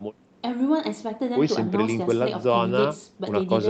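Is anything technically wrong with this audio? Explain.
No, nothing is technically wrong with this audio.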